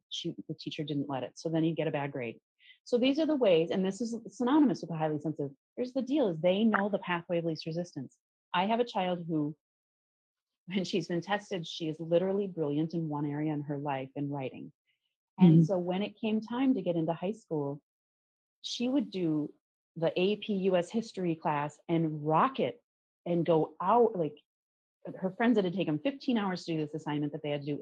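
No technical faults can be heard anywhere in this recording.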